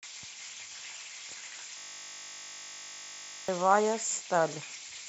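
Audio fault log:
1.78–3.48 s, system hang loop: the speech freezes into one 20 ms slice repeating exactly. This produces a steady 50 Hz buzz, which fits a stalled 20 ms ring buffer.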